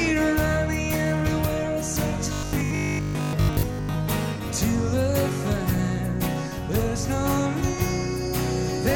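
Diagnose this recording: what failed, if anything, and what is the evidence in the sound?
From 2.33 to 3.97 s the sound turns into a rigid, metallic 50 Hz buzz that only loosely follows the audio: robotic sound from repeated short buffers. The likely cause is driver or buffer starvation, repeating a 20 ms block while most real audio is skipped.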